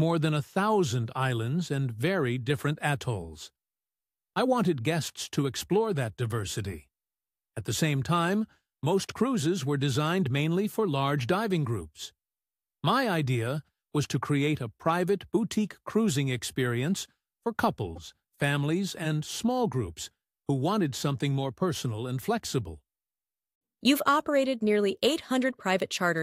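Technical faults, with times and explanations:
17.95 to 17.98 s, corrupt frame decoded: bits inside what sounds like a single compressed frame were damaged, yet the decoder played it, so misread gains and codes put energy in the wrong frequencies for about 24 ms, producing a brief, fairly quiet glitch peaking around -35 dBFS.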